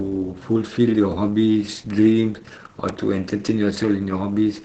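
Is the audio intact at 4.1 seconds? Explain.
No. Opus voice compression runs throughout the speech, so 4.1 s is affected. The sound points to SILK wideband coding at about 10 kbps, with its coarse excitation and nothing above 8.9 kHz, leaving speech muffled, hoarse and slightly robotic.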